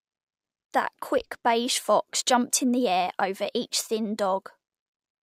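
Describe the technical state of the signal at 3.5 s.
At 3.5 s the speech signal is intact, with no audible fault present at that moment.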